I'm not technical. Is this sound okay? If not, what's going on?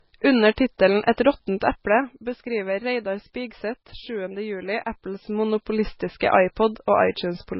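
No. The speech sounds dull and muffled, with nothing above 5.5 kHz, likely because it's low-bitrate audio saved at a high bitrate, so the bigger file can't restore lost detail. From 4.80 to 5.76 s there's zipper noise: the volume moves a fair bit in rapid little steps, about thirty a second, and you hear a fast ticking.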